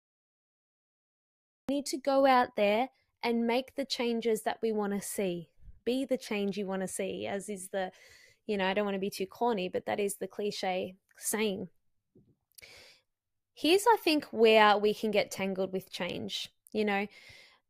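The clip opens with a cut-off start: digital silence runs from 0.0 to 1.69 s, then the speech enters abruptly in mid-sound on "need to go out". There is no natural attack or fade-in, which indicates the capture began late.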